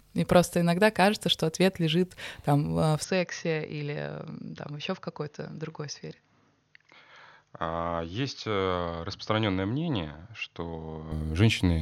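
Input switched to a poorer device from 3.04 to 11.12 s: the speech dulls, losing everything above 6.6 kHz and dropping about 5 dB, likely a microphone change.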